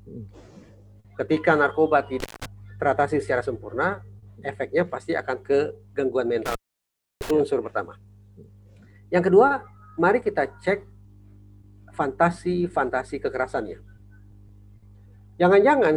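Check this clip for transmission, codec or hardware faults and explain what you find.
A hardware fault appears twice, as intermittent contact at 2.20–2.46 s (open about 173 ms) and 6.46–7.31 s (open about 659 ms). A loose connection breaks the signal path, so the sound drops out with crackle at each edge and faint hiss in the gap.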